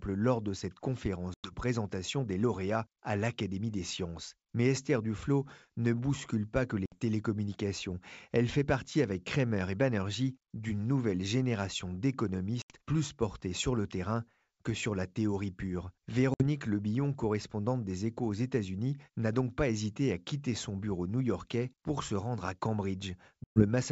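Speech, with five hard-edged dropouts where the sound cuts to silence and then comes back with some roughness that settles within tens of milliseconds. They fall at 1.34 s after "lors de cette" (100 ms lost), 6.86 s after "ne bouscule pas que" (60 ms), 12.62 s just before "plus portés sur le" (80 ms), 16.34 s (60 ms) and 23.44 s (120 ms). This is packet loss on an ADPCM call. A few packets at a time were dropped and filled with silence, and the decoder's adaptive predictor and step size lost track of the sender's until they converged again. The wideband G.722 coding itself stays clear up to about 7 kHz.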